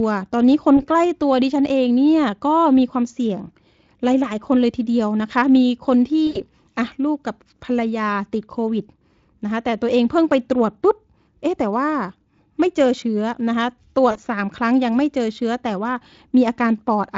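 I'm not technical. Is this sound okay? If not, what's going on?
No. VoIP packet loss concealed by the speech codec hits at 0.77, 6.27 to 6.41, and 14.11 to 14.19 seconds. Bits of the call went missing, so the receiving end stretched the last sound into a brief buzzy or noisy, fading smear, longest at 6.3 seconds.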